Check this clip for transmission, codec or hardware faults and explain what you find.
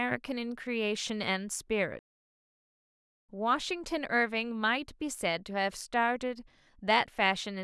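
One fault is present: a playback stall from 1.99 s to 3.29 s. The speech halts abruptly in mid-flow and the output drops to silence for about 1.3 s before it resumes. The likely cause is the player's buffer running dry, or its playback thread being blocked, so no samples reached the output until the data supply recovered. The gap is clean silence rather than noise or a repeated fragment.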